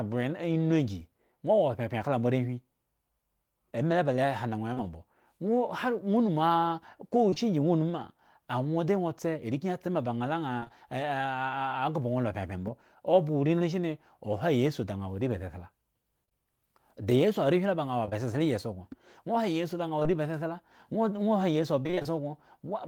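Short concealed packet loss at 4.73 to 4.84 s: about 40 ms of speech never arrived in time, and the receiver extended the preceding sound to cover it, leaving a brief smear that runs slightly long. Two more at 7.30 and 7.34 s each drop 20 ms back to back, heard as a quick wobble. Repeated packet loss (robotic sound) follows at 10.60 to 10.72 s: three gaps, the longest 26 ms, with nearly half the stretch synthesised, so the audio turns choppy. After "wo areba sesla", scattered short gaps from 16.26 to 18.13 s come from about four isolated losses of around 20 ms each, 80 ms in total. Each is patched separately, producing small ticks and hiccups. Short concealed packet loss returns at 19.99 to 20.08 s, two overlapping 20 ms holes just before "ba sesla", which leave a brief smear. Finally, after "ha iyesu", repeated packet loss (robotic sound) from 21.83 to 22.12 s brings six gaps, the longest 23 ms, with 120 ms missing and roughly half the span concealed. 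The result is a choppy, broken stretch.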